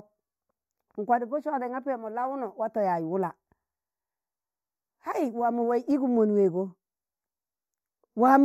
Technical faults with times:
0.00-8.44 channel delay (comb filtering)

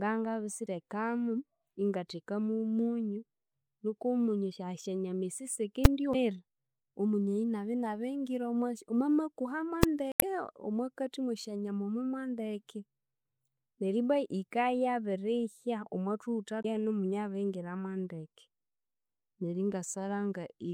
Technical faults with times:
0.64-0.69 damaged data in a compressed stream
5.85 invalid numbers at full scale
6.11-6.15 damaged data in a compressed stream
9.83 invalid numbers at full scale
10.09-10.23 damaged data in a compressed stream
16.60-16.65 damaged data in a compressed stream

